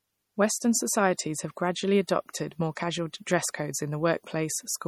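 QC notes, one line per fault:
Throughout, MP3 compression: the speech has a plainly audible watery, swirling texture, with chirpy sibilants and softened consonant attacks. It likely comes from a low-bitrate MP3 encode around 48 kbps. It differs from a simple low-pass because weak frequency lines flicker on and off frame to frame.
2.07 s, pre-echo: just after "have gradually", a brief hiss of about 14 ms creeps in ahead of a sharp onset, and the attack itself sounds smeared. Coding noise spread across the whole transform block leaks into the quiet moment before the transient. That placement, leading the attack rather than trailing it, separates it from ringing or reverb.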